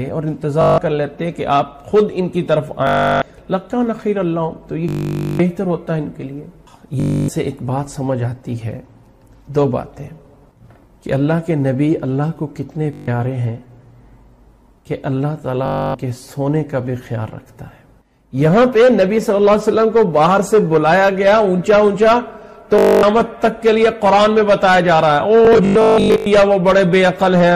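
Bluetooth stutter hits at 0.62, 2.87, 4.89, 7.00, 12.93, 15.66, 22.79 and 25.45 s. Each gap lasts 0.14 to 0.55 s, and the last is broken up over 0.81 s. Missing packets make the receiver loop its last tiny slice, a machine-gun buzz rather than a silent dropout, and the sound then jumps ahead as if it had kept playing.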